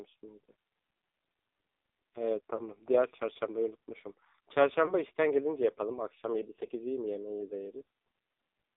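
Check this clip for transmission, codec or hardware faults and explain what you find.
Two faults are present: heavy narrowband mobile codec damage across the whole clip, and three brief lost-frame dropouts.

AMR narrowband mobile codec, throughout: the speech is squeezed into a 300 Hz to 3.6 kHz telephone band and rebuilt from a coarse vocal-tract model with sparse pulses. The heavy buzzy, synthetic texture fits a low mode of about 5.9 kbps.

Lost AMR speech frames, at 2.56–2.62 s, 4.86–4.92 s and 6.66–6.69 s: each time, the decoder bridged a corrupted frame by repeating the previous pitch and vocal-tract settings at reduced gain. The result is a short dip or warble that fits a single 20 ms frame, followed by a moment of weaker, rougher sound.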